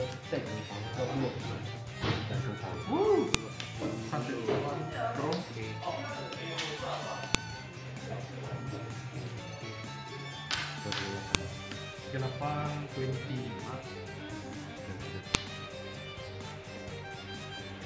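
Sharp, loud clicks snap out at 3.34, 7.35, 11.35 and 15.35 s, exactly 4.0 s apart and regardless of what the sound is doing. This is a file header played as audio: pieces were joined without stripping their WAV headers, so those bytes play as samples.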